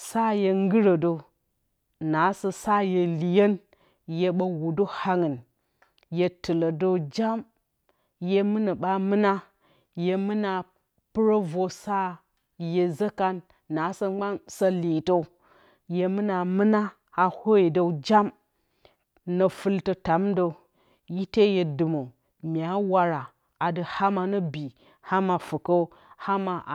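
No technical faults can be heard anywhere in the speech. Nothing in the recording chain stands out at any point.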